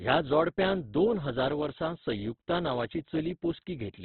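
A short speech clip with heavy Opus compression damage throughout: there is no energy above 4.4 kHz, so the sound is narrowband and dull, and voiced parts come across rough and grainy rather than swirly, as thin bands get filled with folded or noise-like content. This is likely a very low Opus bitrate, one that fits roughly 12 kbps in music mode. On a spectrogram, a flat ceiling cuts off everything at 4.4 kHz, and the harmonics below it look fuzzy and speckled instead of cleanly striped.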